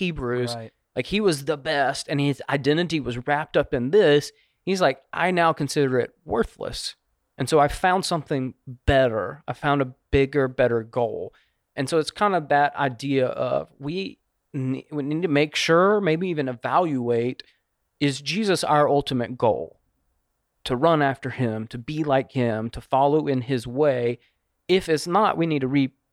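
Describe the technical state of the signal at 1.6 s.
At 1.6 s the speech signal is intact, with no dropout, distortion, clipping or other technical fault present at that moment.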